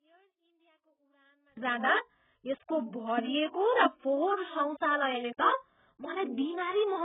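A speech clip with two technical faults. From 0 to 1.57 s the speech nearly disappears when the channels are summed to mono. It drops by about 38 dB, then returns at full level just before "जाँदा यसको". The likely cause is one channel inverted. Reversed polarity on one side makes the shared centre content cancel in the sum. Only a faint residue of the difference survives. Throughout the clip, the sound is dull and smeared. Nothing is present above 3.8 kHz. Sibilants and sustained vowels carry a warbling, fizzy texture. This points to heavy AAC compression, likely AAC-LC at a very low bitrate of around 8 kbps. The encoder pulls the cut-off down hard and quantises coarsely. It leaves spectral holes and noisy fill in the remaining bands.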